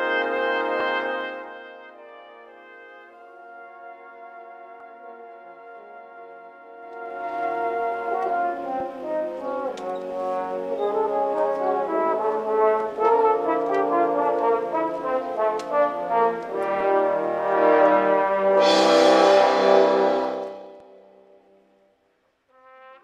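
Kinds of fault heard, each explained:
Zipper noise: three level changes of about 20 dB, two down and one up, move in raw 1 to 2 dB steps, roughly twenty a second, so each one ticks.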